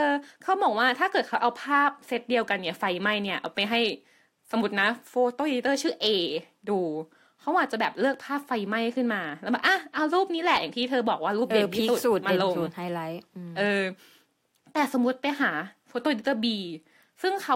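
Speech clip with no audible technical faults to report.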